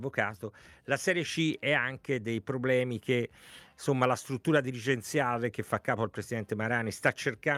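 Clock drift between sender and receiver runs through the whole clip. The sending clock is slow by something like one and a half percent, so the receiver's jitter buffer keeps draining and must stretch the audio to avoid running dry. On a waveform this leaves no single obvious mark. The timing simply slides against a steady grid, and a spectrogram shows onset spacing gradually stretched.

Repeated timing corrections run from 0.57 s to 6.63 s. To stay in step with the slower sender, the receiver repeatedly duplicates short fragments, playing the stretch at about 99% speed and adding roughly a tenth of a second in total. Each repeat is tiny and unevenly spaced, heard, if at all, as faint hiccups and a slightly dragging, unsteady tempo. On the waveform, brief repeated slivers show at splice points, and the spectrogram shows small vertical seams where the repeats join.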